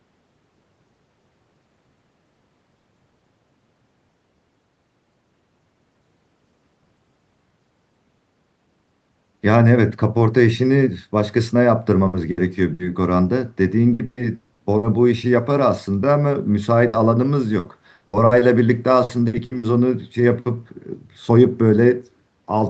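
Short held buzzes or fading hisses cut into the speech at 12.07 to 12.16 s, 12.31 to 12.40 s, 12.73 to 12.82 s and 16.87 to 16.96 s. Each is a burst of packet loss: about 60 ms went missing and the receiver stretched the last sound to fill it before the speech picks up further on.

Alongside these, choppy stretches with pieces missing run from 13.93 to 14.86 s, 17.59 to 18.34 s and 19.03 to 19.66 s. This is repeated packet loss, with four or five gaps in each span, the longest 120 ms. Each gap is patched by continuing the previous sound, so about a third to nearly half of each stretch is filler. All of this sits within the usual 8 kHz limit of the call's Opus codec.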